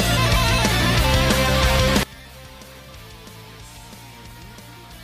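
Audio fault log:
2.03 to 5.04 s, one channel inverted: From 2.03 s to the end, the sound collapses to a faint remnant, about 23 dB quieter than before. Centred material almost disappears. The likely cause is reversed polarity on one stereo channel. When the two channels are summed to mono, everything they share cancels out. Only the small difference between them survives.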